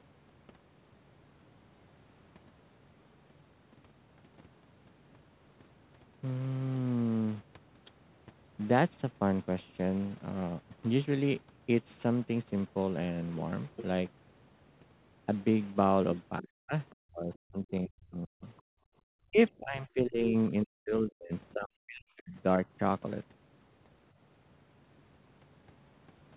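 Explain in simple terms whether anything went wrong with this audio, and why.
A few things went wrong here, all from the call's echo handling.

Between 16.4 and 18.47 s, and again from 19.31 to 22.66 s, the talker's voice keeps sinking to almost nothing in patches. That's speech suppressed in double talk, likely because the echo canceller heard both sides at once and couldn't tell them apart, so it turned everything down.

At 16.9 s there's a tiny, very faint blip of a second voice, the other side's voice leaking through. It's probably a scrap of the loudspeaker sound the echo canceller didn't fully scrub out of the microphone.

From 18.75 to 19.03 s the room sound drops out sharply for about a third of a second, then comes back. That's background gated by the echo canceller: it clamped the microphone hard while the loudspeaker played, then let go. The dull, phone-like tone is just the call codec trimming everything above 4 kHz, which is expected.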